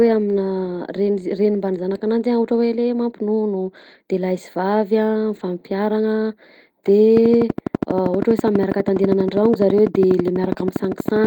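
At 3.61 to 3.67 s, between "le mampinono" and "de lahy", and again at 5.35 to 5.41 s, the speech turns briefly rough and noisy with no gap. These are lost packets rebuilt from error correction: the decoder played low-bitrate backup copies, about 40 ms each. On a spectrogram, the harmonics smear over that short span.

From 7.17 s to the end, a train of clicks ticks steadily at about 12.3 per second, peaking roughly 10 dB above the speech. The clicks are likely interference from nearby equipment. On a waveform they appear as evenly spaced, similar spikes, and on a spectrogram as regular thin vertical lines across all frequencies.

Within that stretch, two more packet-loss repairs roughen the sound, at 8.95 to 9.01 s (about 40 ms) and 10.47 to 10.49 s (about 20 ms).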